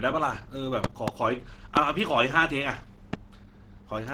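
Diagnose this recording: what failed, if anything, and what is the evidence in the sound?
The whole speech clip sounds hoarse and grainy, with a slightly muffled, rough texture instead of the swirling, holey treble of MP3. The damage is plainly audible, yet content still extends to about 20.4 kHz, so the band is not cut short. This is likely Opus compression at a low rate. The rough, slightly muffled quality fits its hybrid speech mode at around 16 kbps, where the encoder fills starved bands with noise rather than leaving gaps.

Loud pops sit on top of the speech, which carries on unbroken beneath them. There is a double pop between 0.84 and 1.10 s, then single pops at 1.77 to 1.79 s and 3.13 to 3.16 s, peaking about 20, 20 and 15 dB above the speech. Because the sound underneath never drops out, these are not dropouts or buffer glitches. The likely cause is a voltage step or pulse entering the analogue wiring or converter path, from a connector, a switch or static discharge.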